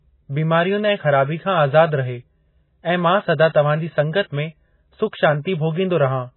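From start to finish the speech carries heavy MP3 compression damage, most likely from a very low bitrate, which fits something around 16 kbps. Nothing survives above 4 kHz, so the top end is simply sliced off and everything sounds dull and boxed in. With so few bits to go around, weak frequency lines keep dropping in and out between frames, giving that watery, swirly texture, and the consonant attacks come out smeared rather than crisp.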